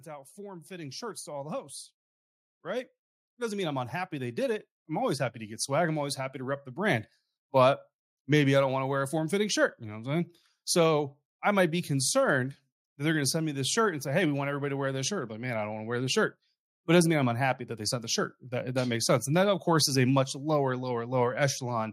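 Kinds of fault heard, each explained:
Automatic gain rising: the level control judged the input too quiet and kept turning it up, lifting the speech by about 17 dB from 0.05 to 6.72 s. Unlike a talker simply speaking louder, the background noise swells in step with the speech, because the whole input is amplified together.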